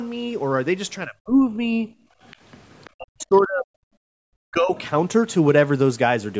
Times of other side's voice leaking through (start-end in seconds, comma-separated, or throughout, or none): 2.29-2.90, 3.23-3.42, 4.77-4.90